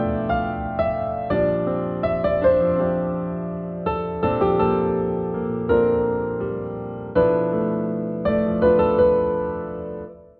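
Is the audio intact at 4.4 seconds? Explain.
Yes, the audio at 4.4 seconds plays through cleanly, with no dropout, click, distortion or other fault at that point.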